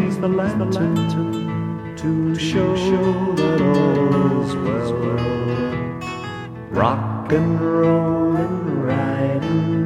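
From the very start until 5.74 s, every sound is followed by a second, somewhat quieter copy around 0.4 s behind, flat and dry with no room tail, which then drops out abruptly. This doubled audio track likely comes from a second, slower capture path mixed in.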